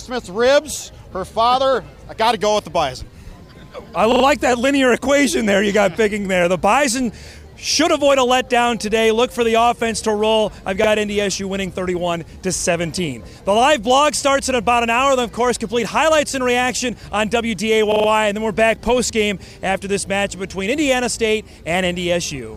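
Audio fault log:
4.12–4.24 s, 10.84–10.88 s, 12.60–12.64 s, 17.92–18.08 s: repeated buffer. A short slice of sound, which fits a 40 ms buffer, loops with a hard join at each repeat, three extra times at 4.12 s, once at 10.84 s and 12.60 s, and four times at 17.92 s, because new audio arrived late. Unlike a dropout there is no silent gap, and nothing seems skipped. The same fragment simply stutters before playback resumes.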